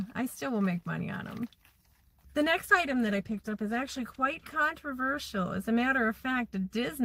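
From 2.68 to 4.65 s a call bitrate drop, 32 to 14 kbps, leaves the sound coarse and muffled but continuous, unlike packet loss gaps.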